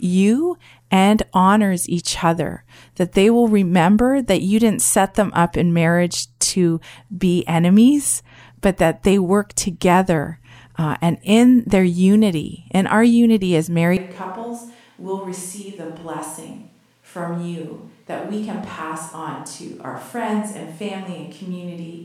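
At 13.97 s, right after "in our unity as", the speech abruptly turns hollow and roomy, loses its low end, and drops by roughly 10 dB, with room noise now audible at around 35 dB below the speech. It stays that way to the end. This sudden change is a switch to a distant microphone: the close mic's signal likely dropped out, leaving only a pickup further away that hears more of the room.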